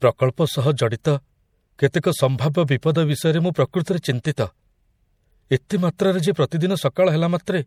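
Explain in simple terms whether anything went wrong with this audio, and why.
Yes, something went wrong, and it runs through the whole recording. The speech still carries compression artefacts, and nothing above 19 kHz survives. This is low-bitrate audio saved at a high bitrate. The recording was most likely squeezed hard into a small MP3 first, losing detail, then saved again as a much larger MP3. The bigger file can't bring back what was already thrown away, so the damage remains.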